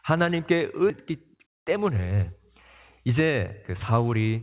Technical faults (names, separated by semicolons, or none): skip ahead; jitter buffer speed-up